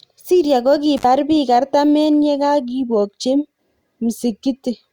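At 0.97 s the speech drops out suddenly. This is an intermittent contact fault. A loose cable or plug briefly loses its connection, and the signal path opens. The gap lasts about 63 ms, ending by 1.04 s. A crackle marks each edge as the contact breaks and then remakes. While the line is open, a faint hiss remains. Then the speech returns.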